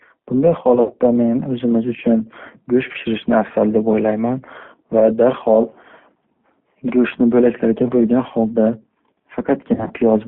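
Throughout, the G.729 codec at 8 kbit/s confines speech to a 200 to 3400 Hz line band and adds a rough, synthetic texture, a steady coloration unlike brief glitches. VoIP packet loss concealed by the speech codec occurs at 0.75 to 0.99 s, about 100 ms lost, at 2.92 s, and at 9.74 to 9.93 s. The decoder stretches the last sound into a fading buzzy tone or coloured noise rather than leaving silent gaps.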